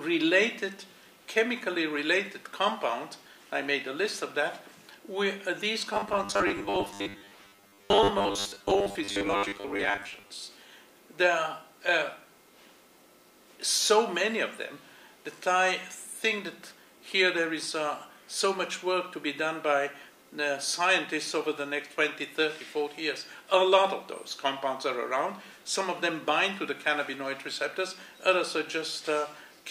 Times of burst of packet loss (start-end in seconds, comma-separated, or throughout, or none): none